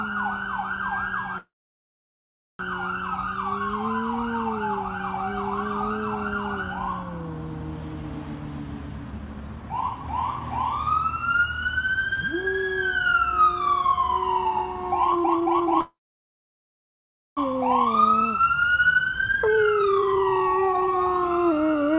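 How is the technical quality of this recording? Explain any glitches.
The recording has a couple of real problems. It's band-limited with nothing above 4 kHz, which fits a narrowband call codec like G.711. On top of that there are two dropouts and two stretches of rushed playback.

Call audio freeze, at 1.38–2.61 s and 15.81–17.39 s: the sound stalls for about 1.2 s and 1.6 s, with a brief fading tail and then mostly silence. The likely cause is delayed packets draining the jitter buffer. Playback then resumes right where it stopped, so nothing is lost, just pushed later.

Jitter buffer speed-up, at 15.11–15.81 s and 17.55–21.97 s: the receiver snips out tiny pitch-period chunks to work off the backlog, about 0.7 s and then about 2 s. That's 191% and 143% speed respectively. Pitch stays put, but it sounds noticeably hurried.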